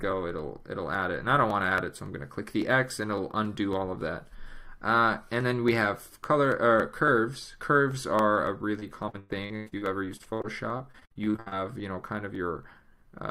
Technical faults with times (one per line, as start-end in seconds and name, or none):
8.79-11.54 repeated packet loss (robotic sound)